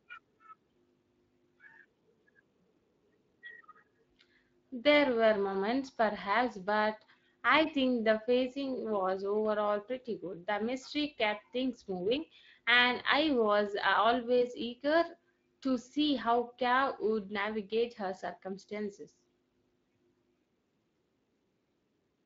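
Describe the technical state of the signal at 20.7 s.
At 20.7 s the speech sounds noticeably noisy and hoarse, a grainy roughness that runs through the whole clip. This is Speex codec damage: the CELP coder has too few bits for the excitation, and the rate heard points to a setting around 20 kbps.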